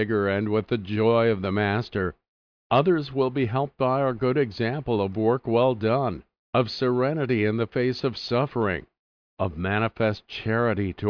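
Speech recording; no technical faults heard.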